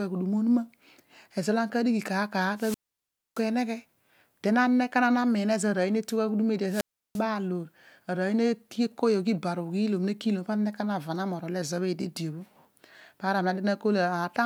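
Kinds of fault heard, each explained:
Wireless microphone squelch dropout: The radio link from an analogue FM microphone weakens until the receiver's squelch shuts the output. Hiss swells briefly, then the speech drops into near silence and returns. It happens at 2.55–3.45 s, muted for 0.62 s, and at 6.66–7.24 s, muted for 0.34 s.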